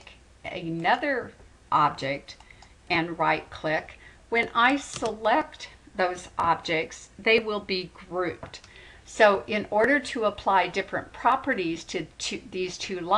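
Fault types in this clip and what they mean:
No technical faults can be heard anywhere in the audio; the signal stays continuous and stable throughout.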